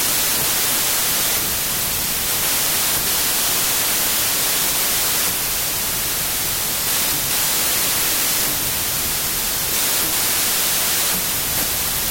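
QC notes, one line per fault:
throughout: wrong sample width. The speech was written as 32-bit integers but is read as packed 24-bit, so each read sample straddles the original byte boundaries and only some frames land on the real signal's top bytes. This gives loud, harsh noise with the speech buried inside it. The voice also plays at 0.75 speed and pitch. A plain sample-rate mismatch would shift speed without the noise, and a byte-order swap would bury the voice without the slowdown.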